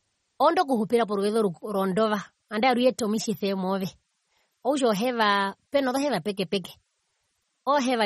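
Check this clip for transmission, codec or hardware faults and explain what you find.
The speech carries audible MP3 compression damage for its whole length. A low bitrate, which fits something near 32 kbps, likely left too few bits, so weak frequency lines drop in and out between frames, giving a watery, swirly texture and smeared consonants. A spectrogram shows nothing above 15 kHz and flickering holes in the upper bands.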